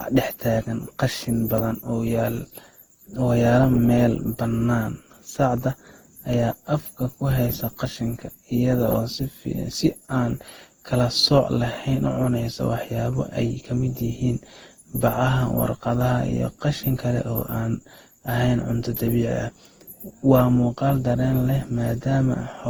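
Across the whole clip, the speech sounds swirly, smeared and hollow, with blurred attacks and content reaching up to about 20.1 kHz. This is generation loss, likely from an Opus encode near 48 kbit/s repeated around ten times, each pass adding fresh quantisation damage.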